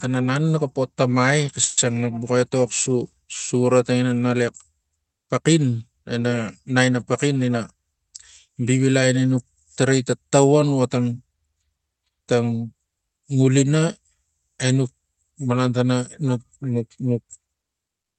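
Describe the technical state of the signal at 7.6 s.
Speech sounds hurried at unchanged pitch, 109% speed from 7.52 to 9.09 s: a jitter buffer speed-up repeatedly cutting pitch periods to drain excess buffered audio.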